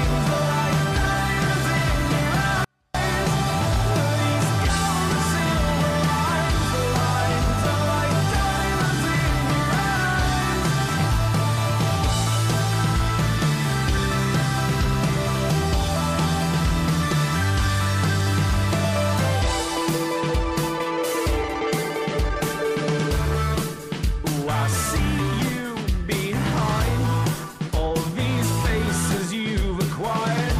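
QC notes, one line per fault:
2.65–2.95 s, 24-bit alignment error (too quiet): for about 0.3 s the sound falls by about 48 dB and becomes nearly inaudible, then returns at full level. Samples that sit in the low 24 bits of each 32-bit word are being read as full 32-bit values, so every sample is scaled down by the same fixed amount. Unlike a dropout or mute, the signal is still there and clean, just far quieter. Unlike a fade, the drop and recovery are instant.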